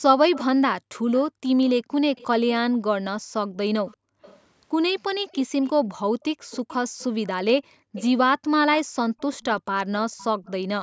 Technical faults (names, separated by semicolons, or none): echo leak; background gated by the echo canceller